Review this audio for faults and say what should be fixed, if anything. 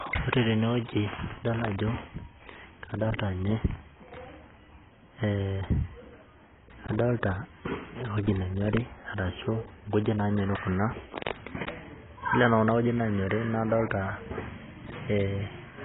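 Throughout, the speech has nothing above 3.8 kHz. This is likely low-bitrate audio saved at a high bitrate, and the higher rate cannot restore what was removed. Re-encode from the original uncompressed source instead of from a compressed copy.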